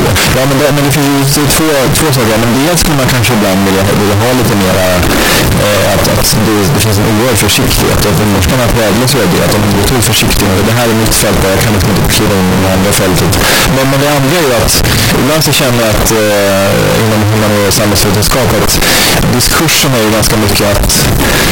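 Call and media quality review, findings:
Float read as integer, throughout the clip. The speech is very loud and harsh, with the waveform flattened nearly square at an almost fixed high level, and background noise as loud as the talker. Pitch remains followable. Likely cause: 32-bit float samples read as 32-bit integer, so sign and exponent bits set the level.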